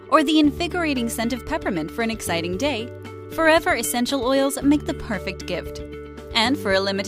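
No dropouts, distortion, noise bursts or other disturbances break into the signal at any point, and its level and tone stay steady throughout.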